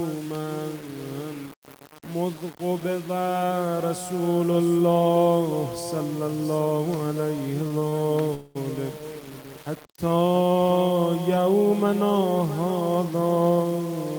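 Right from the start there's a grainy, gritty roughness riding on everything, with an error floor only about 20 dB under the signal. That's low bit depth without dither: it likely went through 5-bit rounding with no dither added, so the error tracks the sound. Quiet passages get crunchy, and anything smaller than one step either vanishes or flickers between two levels.

Between 7.37 and 7.94 s you get repeated stalls, a stutter. Playback catches four times as the jitter buffer keeps running dry, and the receiver stretches the last bit of sound to cover each wait. The fills add up to 66 ms, about 12% of that stretch, with the longest at 26 ms. Nothing is actually lost, but the audio drags and hiccups.

Then from 8.34 to 8.57 s there's a call audio freeze. The sound hangs for 210 ms as a sustained continuation of whatever was playing, and it never drops to silence. When it picks up again, it carries on from where it stopped. 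That points to packets likely being held up in transit until the buffer emptied. The freeze inserts a 210 ms pause and shifts everything after it later by that much, but nothing is skipped.

Near the end, from 12.81 to 13.97 s, a jitter buffer speed-up kicks in. The buffer was holding more than its target, so the receiver trims tiny pitch-period-sized chunks over and over, around 150 ms in total. The result runs at 110% speed with the pitch unchanged, so it comes across as noticeably hurried.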